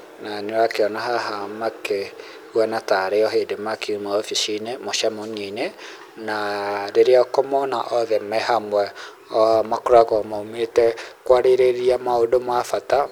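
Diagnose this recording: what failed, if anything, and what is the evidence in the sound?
From 9.53 s to 13.08 s the speech takes on a rough, metallic edge, strongest on the brighter, higher-frequency parts of the sound and gone in the pauses between phrases. This is periodic clock jitter at the converter stage: interference is wobbling the sampling clock at a steady rate of around 500 Hz, so every component of the speech picks up sidebands spaced that far above and below it.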